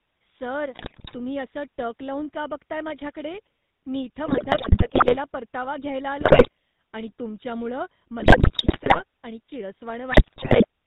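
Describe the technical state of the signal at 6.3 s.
GSM bit errors from 6.20 to 6.49 s: corrupted filter, pitch and gain values reach the decoder, so the speech breaks into squawks, pops and gargling, with level jumps. Underneath, the GSM full-rate codec, consistent with the 13 kbps full-rate coder, cuts everything above 4 kHz and leaves a plainly audible buzzy, gravelly roughness.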